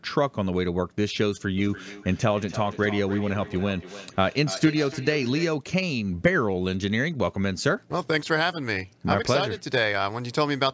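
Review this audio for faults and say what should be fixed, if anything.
A feedback echo between two devices runs from 1.58 to 5.64 s: a second device in the same room is on the call and plays this microphone's signal back out loud, and the microphone picks it up again. Because each echo canceller only removes its own device's playback, that looped copy survives and returns roughly every third of a second, reaching about -13 dB below the speech and sounding thinner and more ringing than the original. To prevent it, mute or leave the call on one of the two devices, or have both participants use headphones.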